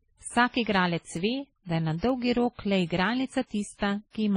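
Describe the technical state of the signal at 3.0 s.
At 3.0 s the speech sounds dull, with nothing above 10.1 kHz, two different kinds of coding grit layered together. This runs through the whole clip. The likely cause is transcoding between lossy codecs: the artefacts fit a low-rate WMA encode near 24 kbit/s later re-encoded as MP3 around 36 kbit/s, the second encoder wasting bits on the first one's damage and adding its own, with the lowest cut-off in the chain kept.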